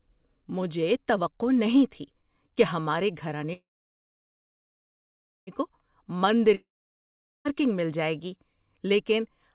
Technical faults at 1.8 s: none

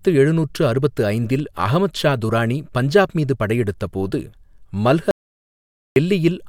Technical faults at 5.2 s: audio dropout to silence

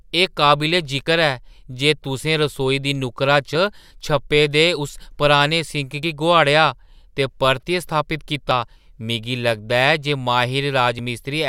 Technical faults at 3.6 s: audio missing between chunks

